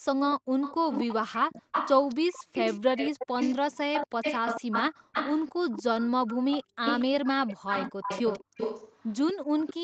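A far-end echo canceller likely failed to remove its loudspeaker pickup. The resulting echo leak repeats the speech 236 ms late, about 5 dB quieter, at 0.31–1.14 s, 1.49–3.56 s and from 3.93 s onward.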